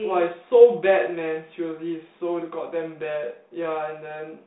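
No technical faults are audible.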